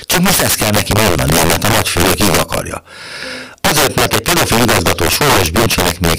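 The recording is speech, and integer overflow runs through it from start to finish. The signal is driven about 8 dB past the integer limit. Instead of being held at full scale, each peak that crosses the limit wraps to the opposite sign. The waveform jumps across the whole range in an instant. Roughly 7 percent of samples go over. On the loudest syllables this gives violent, harsh cracks. They are far sharper than ordinary clipping.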